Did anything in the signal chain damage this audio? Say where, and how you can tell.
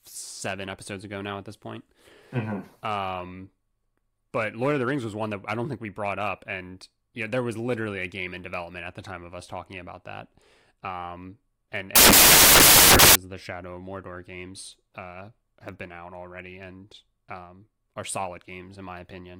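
Yes: samples built from the wrong bytes, from 11.96 to 13.15 s, right after "um and". For about 1.2 s the speech is replaced by loud, harsh broadband noise, close to white on the louder parts. That points to the sample-format conversion stage: the bytes of each sample were assembled misaligned or in the wrong order, so the rapidly fluctuating low-order bits landed in the most significant positions and dominate every value.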